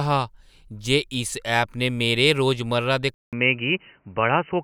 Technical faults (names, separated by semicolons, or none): input switched to a poorer device